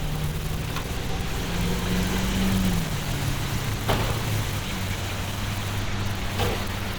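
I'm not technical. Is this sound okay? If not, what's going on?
No, the whole clip has a muffled, hoarse quality, most likely from Opus compression squeezing the sound too hard to save space.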